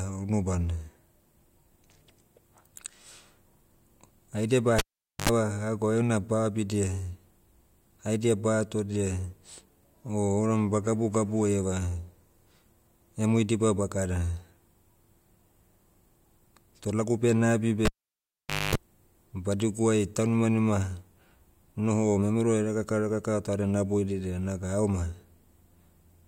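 A speech clip with a cable pulled and plugged in twice, at 4.79–5.29 s and 17.85–18.75 s. Each starts with a pop and drops for about 0.46 s, then 0.85 s. A 50 Hz buzz of 76 ms, then 240 ms, comes from the tip touching first. On a waveform these show as spikes around a flat gap, and on a spectrogram as a stack of 50 Hz harmonics.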